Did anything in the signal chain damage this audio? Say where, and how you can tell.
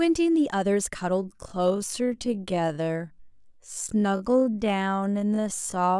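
Yes: a time-stretched section from 1.2 s to the end, slowed to 0.536× speed with unchanged pitch, so the speech drags; likely a software stretch repeating short pieces before storage.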